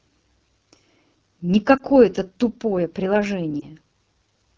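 A short speech recording carries the rough, raspy texture of the AMR wideband (HD Voice) codec throughout. The damage is plainly audible, which fits one of the lowest AMR-WB modes, around 8.85 kbit/s. At that rate the coder has too few bits to model the voice cleanly. It rebuilds the sound below 6.4 kHz from a pulse-excited vocal tract model, and the top band up to 7 kHz is only shaped noise. Voiced sounds come out harsh and grainy. There are also two lost AMR speech frames, each a single 20 ms frame. The first falls at 1.78 to 1.82 s and the second at 3.59 to 3.66 s. Each is heard as a brief dip or warble. The decoder patched each gap by repeating the last good pitch and vocal tract settings at reduced gain, so the voice comes back weak or rough for a moment.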